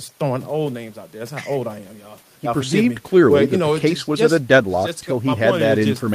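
No technical faults can be heard in the speech recording, with the signal holding steady throughout and no disturbance standing out at any point.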